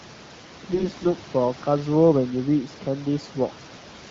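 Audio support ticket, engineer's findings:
AMR bit errors, 0.74–1.08 s: hoarse, gargly scratch, pitch and level roughly held. Flipped low-protection bits across about 17 frames misplace excitation pulses and skew gain, pitch and spectral parameters.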